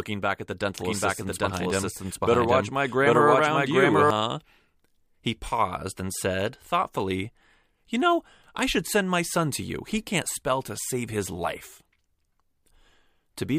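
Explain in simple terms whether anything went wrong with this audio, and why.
From 0.80 to 4.10 seconds there is a doubled audio track: the speech plays twice, the copy about 0.7 seconds behind and just as loud. Unlike an echo, it never fades or sounds roomy, and it cuts in and out abruptly. Most likely the sound was captured twice.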